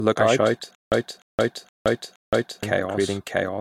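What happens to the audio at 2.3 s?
At 2.3 s the audio is inside a stutter with silent gaps. It runs from 0.75 to 2.63 s, just after "out I shout". A 299 ms burst repeats four times, each followed by about 170 ms of digital silence, roughly every 0.47 s. A stalled stream likely replayed its last fragment on each retry, and the missing audio is lost.

A doubled audio track is also present. A second, full-band copy trails about 0.7 s behind at roughly the same level. It is dry, with no decay or room colour. The likely cause is a slower second capture path.

The clip is also low-bitrate audio saved at a high bitrate. Nothing is present above 16.7 kHz. That cut-off and the remaining artefacts point to a likely earlier AAC encoding near 100 kbit/s. The later high-bitrate MP3 pass restores none of it.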